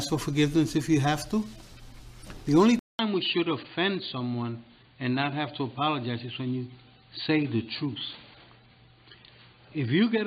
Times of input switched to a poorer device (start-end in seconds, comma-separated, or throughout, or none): 2.79-10.27